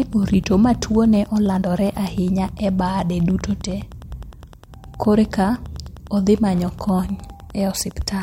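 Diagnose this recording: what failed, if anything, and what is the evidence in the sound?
A faint, steady ticking runs under the speech for the whole recording, close to ten ticks a second and well below the speech level. This is Wi-Fi interference in the analogue wiring: the circuit rectifies a nearby radio's beacon, sent every 102.4 ms.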